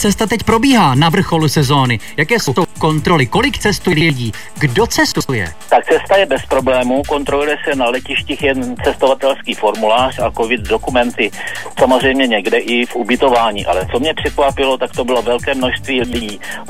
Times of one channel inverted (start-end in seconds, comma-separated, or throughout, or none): none